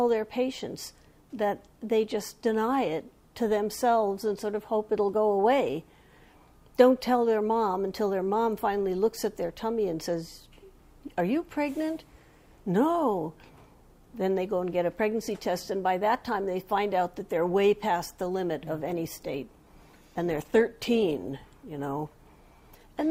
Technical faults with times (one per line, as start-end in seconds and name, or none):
18.74-23.11 adaptive stream at a lower bitrate